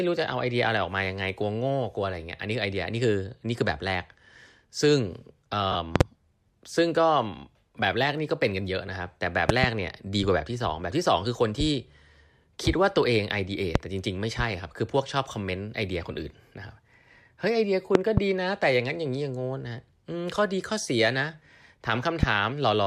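At about 5.72 to 5.75 s there's a short run of lost LE Audio frames, a 30 ms gap, which fits three 10 ms frames going missing. The decoder covers it by replaying the last spectrum with scrambled phase, so the speech briefly turns into a grainy, noisy smear. The dropout is short enough that you get that hiss-like patch rather than a fade to silence. Around it, the LC3 coding is light.

Right after, a series of loud pops starts, most sitting roughly 25 dB above the speech. The likely cause is voltage spikes from a switch, static or a driver glitch landing on the signal. There's a double pop at 5.96 to 6.03 s, another pair at 9.49 to 9.66 s, a single one at 13.75 to 13.78 s, and a further pair at 17.95 to 18.20 s. The last single pop, at 22.23 to 22.25 s, is a bit softer at about 20 dB. The speech carries on underneath each one.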